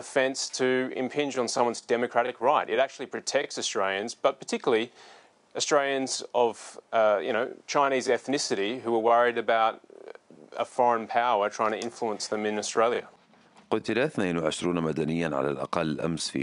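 No technical faults are audible anywhere in this audio.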